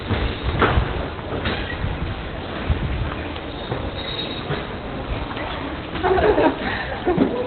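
A recording of everyday sound with heavy Opus compression damage from start to finish. Nothing reaches above about 4.3 kHz, so the top end is simply gone and everything sounds muffled and boxed in. Textures turn hoarse and grainy rather than swirly. That narrowband cut-off and coarse, rasping character point to the encoder's speech-oriented SILK mode at a very low rate, which fits around 12 kbps. The likely cause is an aggressive Opus encode squeezing the signal into narrowband.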